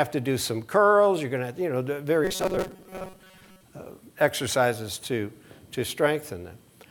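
The audio turns robotic from 2.25 to 3.63 s, with robotic sound from repeated short buffers. Across that stretch the sound becomes a rigid, metallic buzz pitched at 188 Hz. That pitch matches a loop of about 5.3 ms. The likely cause is new audio arriving too seldom, so the playback repeats the last short buffer to fill the gap. Most of the passage, roughly two thirds or more, is repeated material, and the real audio underneath is skipped.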